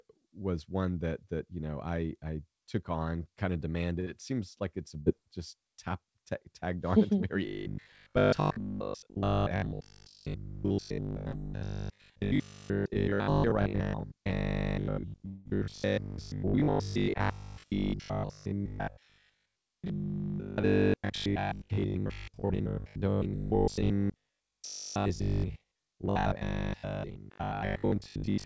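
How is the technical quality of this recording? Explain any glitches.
The recording is clearly degraded by network faults, heard over a call path whose codec leaves nothing above 8 kHz.

Burst of packet loss, 4.00–4.08 s after "took on kind of", and 5.00–5.08 s between "seems like it's a" and "just tap": about 60 ms lost each time, bridged by a fading continuation of the last sound. Both are longer than a tick, but the audio resumes quickly.

Robotic sound from repeated short buffers, 7.46 s to the end: a rigid 50 Hz metallic buzz, likely from a 20 ms buffer repeated while most of the real audio is skipped. Unlike packet loss, it is continuous rather than a gap.

Short concealed packet loss, 11.32–11.35 s: about 20 ms went missing and was filled with a continuation, heard as a brief smear or wobble, far shorter than a burst.

Long network dropout, 15.27–15.47 s: about 180 ms never played. 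The last sound is stretched into a fading continuation across the whole hole with no silence, and the audio then jumps ahead.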